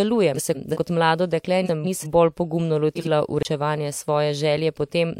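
Frames out of order occur three times in this speech. From 0.36 to 0.77 s, just before "kot mlado dekle", and from 1.66 to 2.07 s, between "kot mlado dekle" and "bolj pogumno", two adjacent blocks of about 186 ms each, which fits runs of four frames, were decoded in swapped order. From 2.95 to 3.08 s, after "bolj pogumno", two blocks of about 46 ms, consistent with single frames, are exchanged. Each stretch sounds like a garbled flutter, and no time is lost. At 3.43 s a CD skip produces a brief mute of roughly 20 ms as the laser jumps to another turn of the spiral. Playback then resumes from a different point, so the sound lurches abruptly.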